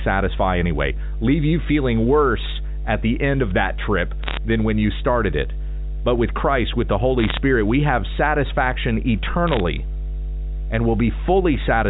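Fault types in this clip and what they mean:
Mains hum, throughout: power-line coupling puts a steady 50 Hz tone under the speech, strong enough to sit only a little below it.
Bit errors on a digital phone line, 4.24–4.37 s, 7.19–7.38 s, 9.48–9.60 s: flipped bits corrupt single samples, giving brief crackly bursts of sharp ticks, first just after "end of that trip".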